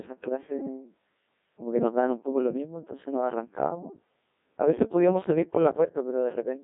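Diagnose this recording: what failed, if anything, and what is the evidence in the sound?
Codec stage: a Codec 2 vocoder throughout resynthesises the speech from sine waves, sounding buzzy and robotic, consistent with 1.6 kbit/s. A spectrogram shows tidy synthetic harmonics with nothing above 3.8 kHz.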